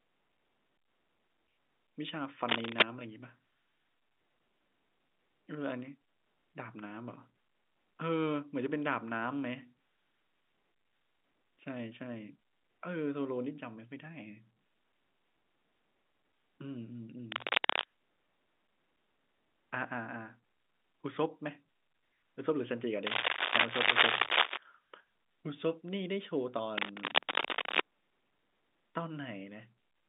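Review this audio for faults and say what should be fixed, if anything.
A worn lead, connector or control was likely being moved, its contact resistance fluctuating rapidly. This produced cable scratch noise: ragged scratching bursts over the speech, at times louder than it, at 2.45–2.83 s, 17.32–17.86 s, 23.07–24.59 s and 26.77–27.81 s. Cleaning or replacing the suspect cable and connectors, and securing them so they cannot shift during recording, would prevent it.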